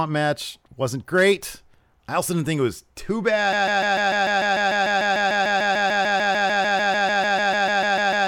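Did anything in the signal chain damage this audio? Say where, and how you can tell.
Yes. Right after "think it was too", at about 3.53 s, the audio falls into a broken-record loop: a fragment of roughly 0.15 s repeats exactly, back to back, 32 times through to the end of the clip. The likely cause is a stall in the playback or stream buffer, where the player keeps replaying the last chunk it had because nothing new arrived. Everything that should have followed those words is gone.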